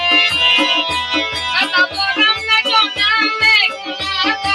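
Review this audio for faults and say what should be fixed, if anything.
A noise suppressor applied to music or sounds runs through the whole clip. It treats sustained and fading parts as noise and pulls them down. Sudden onsets pass almost untouched. Level swings by roughly 5 dB as the suppressor opens and closes. The sound pumps and thins between attacks, and tails shrink sooner than they should. Held material loses body and ambience.

There is also sound cut by the noise suppressor between 3.72 and 3.96 s. Here the processor judged the sound to be noise and clamped it harder than the rest. The deepest drop is about 6 dB. Around a fifth of a second is affected. The sound sinks in level, so the passage dips.

To prevent both, bypass speech-oriented noise suppression on non-speech material, or switch it to a music-safe mode.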